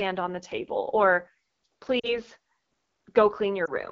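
It's a speech clip squeezed through the AMR wideband (HD Voice) codec, and it sounds rough and raspy throughout, which fits one of the low rates, around 8.85 kbit/s. There are also lost AMR speech frames. From 2.00 to 2.19 s the sound drops toward silence as the decoder repeats stale pitch and vocal-tract settings, which fits two dropped frames. From 3.65 to 3.72 s there's a shorter dip or warble, consistent with one lost frame.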